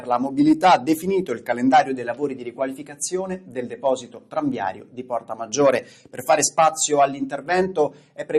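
All through the clip the level pumps and flutters, with held parts and decaying tails thinning while attacks come through intact. This is a noise suppressor applied to music or sounds: a speech-oriented processor misreads steady content as noise, swinging its reduction by around 10 dB.

At 2.38 to 2.60 s, 2.79 to 2.98 s, 3.40 to 3.57 s, 4.02 to 4.35 s, 4.74 to 5.33 s, 6.02 to 6.18 s and 7.90 to 8.24 s, sustained material sinks or its decay is clipped short, dropping by about 5 dB at most. Each is sound cut by the noise suppressor, which judged it noise.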